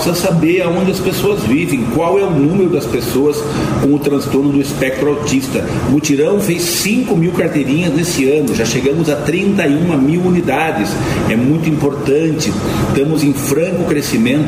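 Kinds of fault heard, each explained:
Overlap between stream segments, at 6.41 to 6.43 s and at 10.40 s: two segment time stamps overlapped and the player trimmed real sound, so 10 to 20 ms drop out and the waveform jumps, heard as tiny skips at boundaries consistent with 2-second segments.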